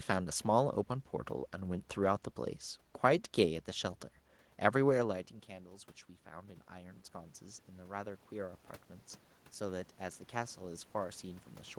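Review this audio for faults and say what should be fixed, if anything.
Automatic gain rising, 6.23 to 8.67 s and again from 9.61 s to the end: the talker moved away around 5 s, the input dropped about 14 dB, and the gain control climbed about 5 dB, so voice and room noise swell together. Keeping the talker at a steady distance from the microphone, or limiting how far the gain control can boost, would prevent it.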